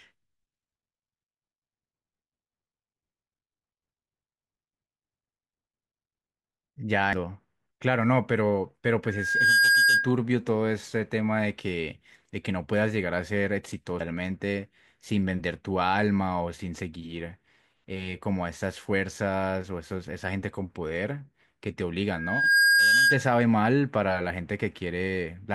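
A speech recording with two kinds of trouble. Damaged data in the compressed stream causes brief glitched blips at 7.13 s and 14.0 s, where the decoder loses sync on corrupted frames. A loudspeaker feedback squeal hits at 9.04 to 10.15 s and again at 22.09 to 23.30 s. It's a 1.6 kHz howl that swells over about half a second to around 10 dB above the speech, because the mic is picking up its own speaker.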